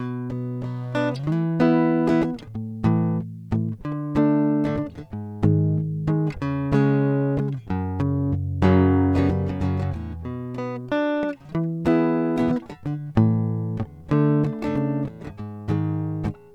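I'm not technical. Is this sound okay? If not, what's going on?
Yes, this music comes through with no technical faults to be heard anywhere in the recording.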